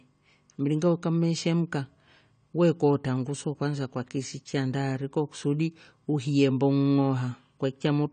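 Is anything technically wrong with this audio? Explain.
Yes. The speech carries AAC compression damage from start to finish. Nothing is present above 9 kHz, so the top end sounds dull and closed in. Sibilants come out smeared and fizzy, and sustained sounds have a warble. The likely cause is a low-bitrate AAC-LC encode, which fits a rate of around 32 kbps. At that rate the encoder lowers its cut-off and quantises the remaining bands coarsely, leaving holes in the spectrum.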